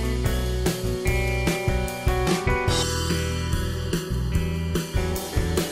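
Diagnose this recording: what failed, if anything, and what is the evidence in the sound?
The fault sits at the driver or buffer stage, where one channel slips behind the other before a mono sum. From 2.83 s to 4.97 s the sound turns hollow and phasey, then recovers. This is channel delay, heard as comb filtering. The offset is well under a millisecond, roughly 0.7 ms. Summing cancels shared content at fixed, evenly spaced frequencies. The first notch lands around 700 Hz.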